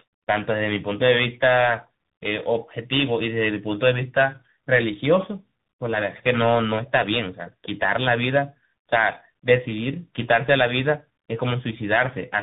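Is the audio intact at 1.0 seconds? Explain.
No. At 1.0 s the speech is already affected by tandem speech coding, present throughout the clip. It was coded twice in succession, consistent with an AMR-NB stage followed by CVSD, so errors compound. The result is rough, warbly, muffled sound with nothing above 3.8 kHz.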